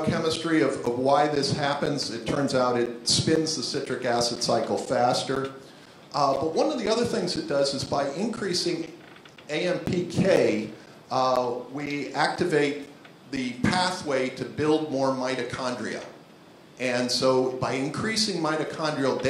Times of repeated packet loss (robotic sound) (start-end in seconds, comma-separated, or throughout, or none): none